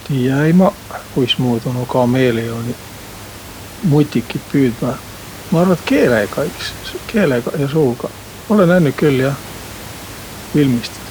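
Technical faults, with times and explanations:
No technical faults detected.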